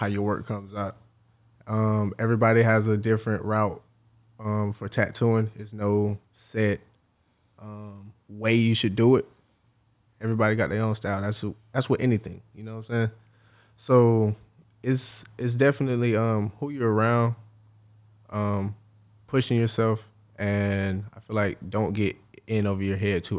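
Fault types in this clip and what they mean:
No technical faults are audible anywhere in this recording.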